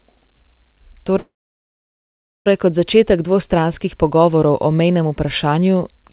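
A speech recording carried over a narrowband call link, with nothing above 4 kHz, consistent with a codec like G.711 A-law. At 1.18 s the sound briefly smears into a fading buzz, then goes silent for about 1.2 s before resuming at 2.48 s with nothing lost. This is a call audio freeze, likely from delayed packets draining the jitter buffer, which pushes everything after it about 1.3 s later.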